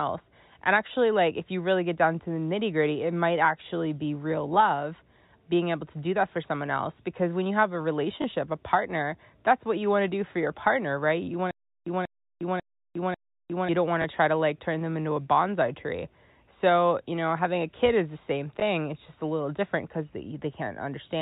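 Packet loss with the last packet repeated hits this telephone-band speech recording at 8.22 s, between "when you have a" and "a partner that's what", again at 14.02 s just before "to try to like", and at 18.60 s right after "kid is the same". Each time about 20 ms of audio is missing, which fits a single lost 20 ms packet. The receiver fills the gap by replaying the previous packet, and each single repeat sounds like a small blip. A stutter with silent gaps runs from 11.51 s to 13.69 s. The same 189 ms burst of sound plays four times, each followed by about 356 ms of dead digital silence, so it comes back at an even 545 ms rhythm. Whatever should have played in that stretch is gone. The likely cause is a stalled stream or player that replays its last buffered fragment at each retry and then runs dry until the next attempt. The G.711 A-law telephone coding at 64 kbps limits the sound to below 4 kHz, with at most a faint layer of quantisation noise.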